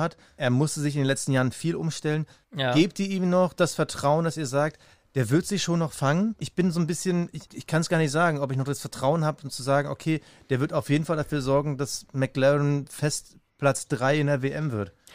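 No technical faults can be heard anywhere in this speech recording.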